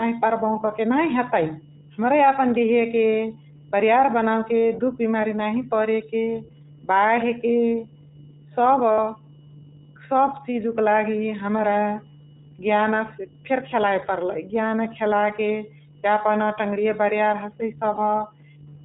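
The whole speech clip carries iLBC codec damage, and it is plainly audible. The band stops at 4 kHz, so sibilants lose their edge and the sound is dull. The speech stays clear but has a rough, slightly synthetic grain. Each short frame is coded on its own, without borrowing from the one before. The character fits the 15.2 kbps mode with 20 ms frames.

From 8.92 to 8.99 s there are lost iLBC frames. About 60 ms of packets went missing, which points to three frames in a row. The decoder fills the hole by repeating the last pitch cycle mixed with noise. It sounds like a brief held vowel with a buzzy, breathy tinge.

A second, shorter loss of iLBC frames falls between 17.96 and 17.99 s. This gap is about 20 ms, which fits a single missing frame. The same repeated pitch cycle fills it, heard as a tiny buzzy hold. In both places the speech snaps back almost at once, because each iLBC frame stands alone.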